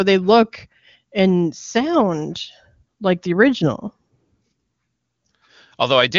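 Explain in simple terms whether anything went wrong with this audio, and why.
Nothing went wrong with this speech recording. It went through an AMR wideband (HD Voice) codec, the phone-call compression used for HD Voice, which here keeps the voice clear and natural, with at most a faint trace of that processing.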